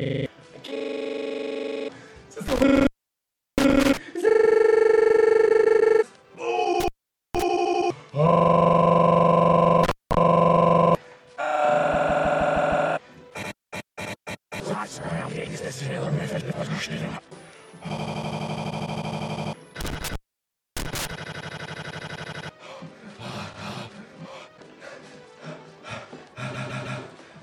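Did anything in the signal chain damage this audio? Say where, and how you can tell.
Yes, in two places. An intermittent contact in the analogue wiring opens the line at 2.48–3.97, 6.80–7.42, 9.83–10.17 and 19.81–21.11 s, for gaps of about 0.7, 0.5, 0.2 and 0.6 s. Each shows as a near-flat waveform with crackle spikes at its edges.

Repeated frames at the codec or storage stage make a 156.7 ms block play again at 5.47–5.94, 11.93–12.87, 18.69–19.16 and 26.53–27.00 s, fitting a group of six frames. It is heard as stutter. A spectrogram shows identical copied slices butted together, each repeat adding its length to the audio.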